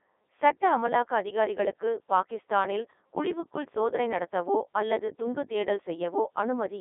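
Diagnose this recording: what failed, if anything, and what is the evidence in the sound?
The codec stage is the culprit. All the way through, the speech has the robotic, buzzy quality of the Codec 2 vocoder, and the damage is heavy. The decoder isn't rebuilding the original waveform; it synthesises the voice from sine waves driven only by pitch, voicing, energy and a rough spectral envelope. The density of the artefacts fits the 3.2 kbit/s mode. The audio sits in a narrow 300 Hz to 3.6 kHz radio band, with nothing above 3.8 kHz.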